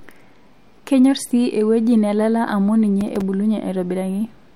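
Speech with a burst of processor overload crackle from 3.01 to 3.21 s: a handful of missed few-millisecond buffers leave tiny silent gaps with hard edges. Unlike a single dropout, the clustered gaps give a gritty tearing that stops once the load passes.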